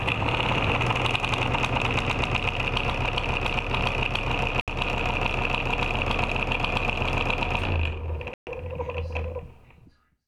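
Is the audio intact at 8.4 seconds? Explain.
No. A Bluetooth stall cuts the sound to silence from 8.34 to 8.47 s, a gap of 131 ms, before it picks up again. Interference likely held packets back until the headphones' buffer ran dry, so playback waited for the resent data.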